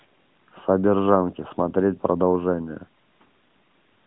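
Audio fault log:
Nothing stood out on listening to this speech clip.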